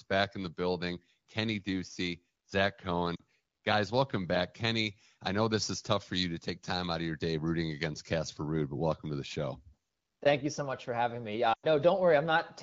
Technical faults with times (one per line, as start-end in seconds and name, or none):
3.16-3.22 lost AMR speech frames
11.53-11.67 lost AMR speech frames